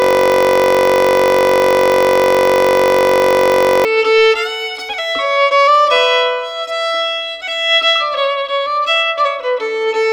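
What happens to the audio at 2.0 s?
At 2.0 s the audio is stuck in a system hang loop that runs from the start of the clip, already under way at 0.0 s, until 3.85 s. The host or driver has stalled while the audio hardware keeps replaying the same ring buffer, so one 21.33 ms slice repeats exactly, well over a hundred times. That length fits a 1024-sample buffer, and the 46.9 Hz repetition rate is heard as a steady, rough buzz.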